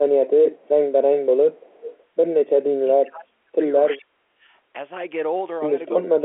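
Speech on a telephone line repeatedly ducks and breaks up: at 0.0 to 0.94 s, 1.1 to 1.62 s, 2.75 to 3.55 s, 3.94 to 4.47 s and from 6.0 s to the end, the voice sinks by roughly 20 dB at first and by about 30 to 35 dB later, fading or dropping out in pieces. This is speech suppressed in double talk, likely from an echo canceller that, with both sides talking at once, could not tell the near talker from loudspeaker echo and so turned everything down. Between 1.64 and 2.03 s a faint, delayed copy of the voice trails behind, lagging by 369 ms and sitting roughly 20 dB below the speech. That is an echo leak, likely where a loudspeaker's sound reached the far microphone and the canceller there let a residue through to be sent back. The G.711 telephone coding carrying all this keeps the narrow 300 Hz to 3.4 kHz line band, with nothing above 3.8 kHz.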